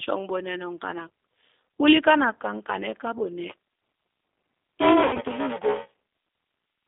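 The speech passes through a G.729 codec at 8 kbit/s, with the line band running from 250 Hz to 3.6 kHz. The frames are rebuilt from a vocal tract filter, a pitch predictor and a few pulses, so the voice sounds thin, slightly rough and synthetic for the whole clip. From 3.50 s to the end there is buffer tearing. The writer and reader of the playback ring buffer have slipped, so roughly a third of each buffer replays audio about 10 ms old with hard joins, which gives a 345 Hz robotic buzz that fits a 128-sample buffer. From 5.03 to 5.19 s there is VoIP packet loss concealed by the speech codec. About 100 ms of audio went missing, which points to five lost packets, and the decoder stretches its last pitch and filter into a buzzy tone or coloured noise that fades and stays weak or distorted for a short time after packets resume.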